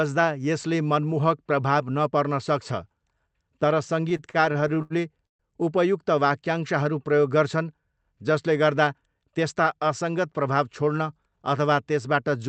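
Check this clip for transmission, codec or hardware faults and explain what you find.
Two faults stand out in this speech clip. It passes through a WebRTC call path with the Opus codec, and its top end stops at about 8 kHz.

Repeated stalls (stutter) run from 4.09 to 5.42 s. Packets arrived late or too slowly, so the jitter buffer kept running dry. Each time, the receiver stretched the last sound until fresh audio came in. There are 11 such gaps. The longest lasts 130 ms, and the fills total 340 ms, about a quarter of that stretch. Nothing is lost. The speech drags, hiccups and repeats itself.

A jitter buffer speed-up follows from 8.83 to 9.26 s. Too much audio had built up in the buffer. To cut the delay, the receiver dropped tiny pitch-period slices many times in a row, about 50 ms in all. The speech plays at 111% speed, and its pitch stays the same. That short passage sounds rushed.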